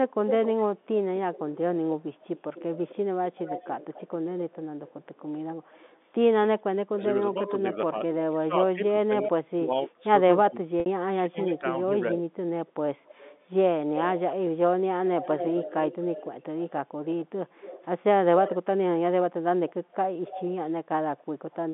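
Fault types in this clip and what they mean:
Echo leak: a delayed copy of the speech keeps coming back about a quarter of a second late, drifting from 256 to 276 ms over the clip, sometimes faint and sometimes fairly loud. It's likely a loudspeaker at the other end whose echo canceller isn't catching everything.
Speech suppressed in double talk: between roughly 6.95 and 12.19 s the speech keeps dipping hard, around 30 dB at the deepest, adding up to about two seconds. This is likely the canceller failing to separate talker from echo while both sides spoke, so it ducked everything.
Packet loss with pitch repetition: at 10.8 s there's a 60 ms gap that's been papered over by repeating the last pitch period. You hear a brief held, buzzy tone before the speech resumes. That length fits three lost 20 ms packets.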